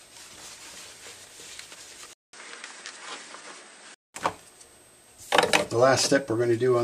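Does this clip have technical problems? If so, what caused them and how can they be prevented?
Yes. The input was likely switched to a poorer device from 2.13 to 4.14 s: a gap of about 200 ms opens at the switch, then nothing above 10.4 kHz comes through, so the sound turns duller, with a faint new noise floor and no real change in level. Locking the recording input to one device, and disabling automatic device switching, prevents this.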